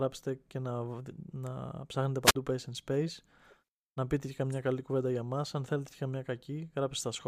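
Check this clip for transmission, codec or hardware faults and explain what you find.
There is one fault, a wireless microphone squelch dropout from 2.23 to 2.35 s. Hiss briefly swells, then the speech cuts to near silence for about 45 ms before returning. The radio link faded, so the receiver's squelch muted its output until the signal recovered.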